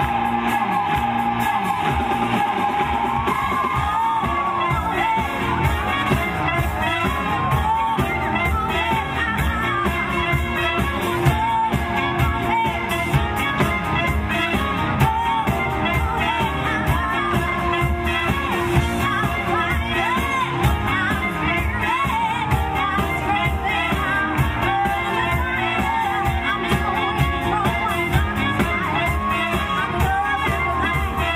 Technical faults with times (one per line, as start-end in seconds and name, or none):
none